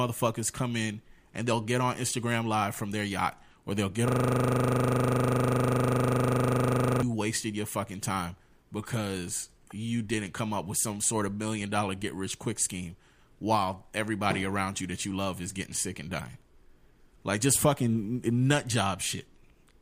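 Speech, interrupted by a system hang loop from 4.08 to 7.02 s. Right after "yacht or they'll get", the audio freezes into one 40 ms fragment repeating exactly, 74 times, for a rapid 25 Hz buzzing stutter until "wasted your fucking time" resumes. The computer or driver stalled while the sound hardware kept replaying the same ring buffer. On a waveform this appears as an identical 40 ms shape tiled end to end, and on a spectrogram as a frozen spectral slice with harmonics spaced 25 Hz apart.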